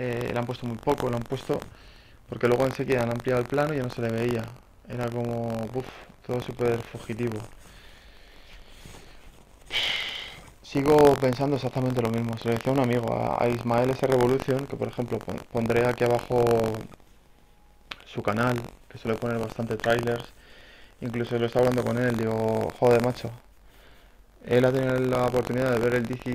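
Buffer tearing runs through the whole clip: a steady robotic rattle at 46.9 Hz that rides on the sound and disappears whenever the signal drops out. The write and read positions in the output ring buffer have drifted until they cross inside every period, so a small slice of each buffer, a few percent, still holds audio from about a tenth of a second earlier. The hard joins either side of that slice repeat at a rate that fits a 1024-sample buffer.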